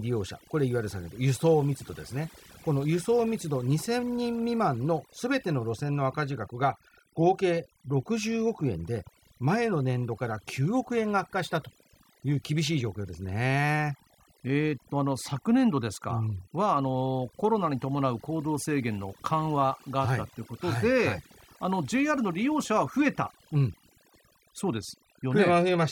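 Throughout the speech, overdone noise removal is at work: the noise reducer was set so hard that frequency bands near its noise estimate are pulled down or switched off, taking quiet parts of the voice too. The background drops and breaks up into twinkling specks. A spectrogram would show scattered isolated bright dots in the gaps and ragged, patchy edges around the speech harmonics.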